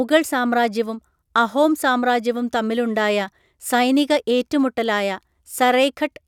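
Speech recording, no technical faults found anywhere in the clip.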